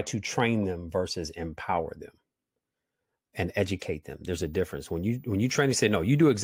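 From 4.32 s to 6.32 s a switching supply whistle comes in: a thin, high tone near 15 kHz, wandering between about 14.66 and 14.80 kHz, sitting roughly 35 dB under the speech. It's a power supply's switching running in the audible range.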